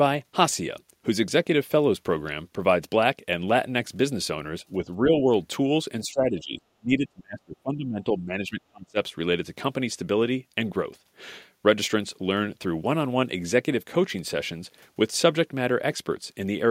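An echo canceller likely mistook the talker for loudspeaker echo while both sides spoke, causing speech suppressed in double talk. From 4.80 to 5.27 s the speech dips slightly, and from 6.04 to 8.98 s it drops deeply across those three seconds.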